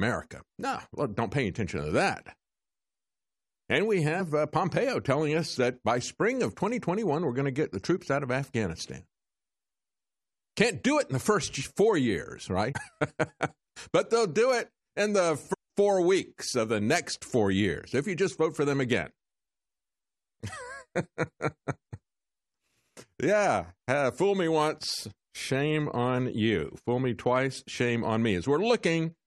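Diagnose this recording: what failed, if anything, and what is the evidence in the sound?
Speech jumps ahead at 4.19, 12.71 and 15.52 s, losing roughly 70 ms, 150 ms and half a second: compressed frames skipped by the codec decoder, in whole 23.2 ms frames.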